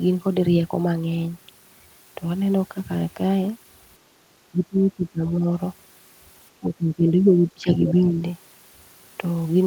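At 4.51–5.44 s, 6.6–7.69 s and 7.9–8.19 s the speech dips by up to about 20 dB, showing as thinned waveform and faded spectrogram patches, likely speech suppressed in double talk.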